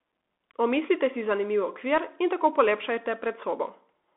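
From start to finish the speech is thin and boxed-in, confined to roughly 250 Hz to 3.5 kHz, with scratchy sibilants and a grainy hiss beneath it. This is the Bluetooth CVSD headset codec, coding one up-or-down bit per sample, which fits a 64 kbit/s stream.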